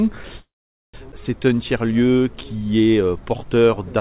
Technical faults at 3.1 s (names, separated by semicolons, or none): none